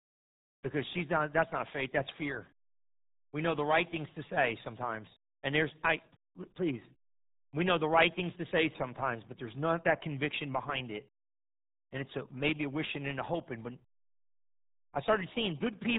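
From start to finish the speech carries heavy RealAudio 14.4 codec damage. An 8 kbit/s dial-up speech codec strips away detail, leaving a muffled, gargly voice. On a spectrogram all energy stops sharply near 3.9 kHz, with smeared, blocky harmonics below.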